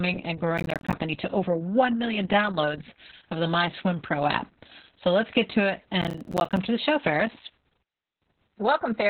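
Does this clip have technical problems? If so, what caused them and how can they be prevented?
Yes. Opus voice compression runs through the whole clip: the speech is muffled, hoarse and slightly robotic, which fits a very low bitrate near 6 kbps in narrowband SILK mode. A spectrogram shows nothing above about 4.3 kHz. Allow a higher bitrate so the coder keeps a wider band.

Processor overload crackle tears the speech at 0.58 to 0.93 s, just before "to over", and at 6.02 to 6.57 s, between "let's get to it" and "to the show". In each burst around twenty buffers of roughly 10 ms each missed their deadlines and played as silence, leaving a waveform riddled with hard-edged gaps. Use larger buffers or reduce the processing load.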